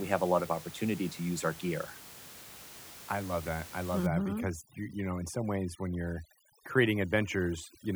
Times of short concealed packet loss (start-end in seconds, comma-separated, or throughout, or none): none